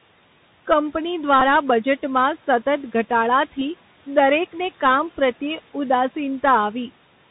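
Bluetooth CVSD headset codec, throughout: the speech is squeezed into the narrow headset band, with nothing above 4 kHz. The one-bit up-or-down coding, which fits a 64 kbps link, can't keep pace with loud, bright sounds. Sibilants turn scratchy and a granular hiss sits under the speech, with the room noise about 24 dB down.

Bluetooth headset packet repeated, at 1.40 s and again from 3.60 to 3.62 s just before "દરેકને કામ": each time, headset voice packets were lost and the last one's bits were decoded again. About 15 ms of repeated material, which fits roughly four 3.75 ms packets, gives a short buzzy burst near 267 Hz.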